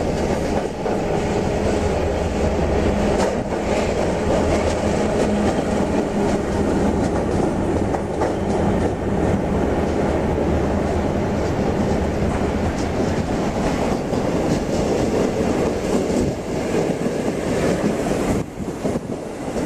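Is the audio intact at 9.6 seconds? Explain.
Yes, the audio at 9.6 seconds is intact, with no dropout, click, distortion or other fault at that moment.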